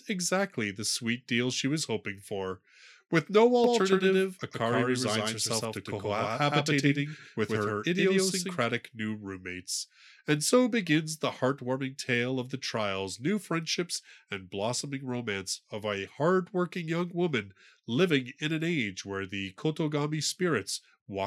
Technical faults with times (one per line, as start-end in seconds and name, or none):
3.64-8.64 doubled audio track